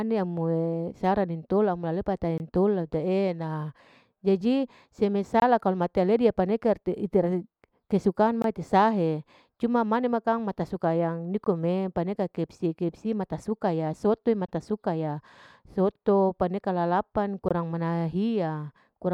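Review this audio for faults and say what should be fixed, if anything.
The speech stops dead six times in short, hard-edged holes of about 21 ms, at 2.38–2.40, 5.40–5.42, 8.42–8.44, 11.44–11.46, 14.46–14.49 and 17.49–17.51 s. This is a gap between chunks. The audio arrives in 3-second pieces, and silence is inserted at each join, probably one frame of padding or a late start per chunk. The gap length fits a 1024-sample frame at 48 kHz. Nothing is lost, but the flow breaks every 3 seconds. To prevent it, trim codec padding and queue each chunk so it plays back-to-back with the previous one.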